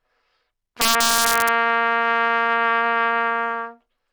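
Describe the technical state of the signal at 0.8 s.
Violent, sharp cracks burst out of the louder moments from 0.81 s to 1.49 s, far harsher than ordinary clipping would sound. This is integer overflow: the signal was driven roughly 6 dB past the largest value the integer format can hold, and instead of being limited at that ceiling, each excessive peak wrapped around to the opposite sign. Every such peak flips across the full range in one sample, producing those abrupt cracks.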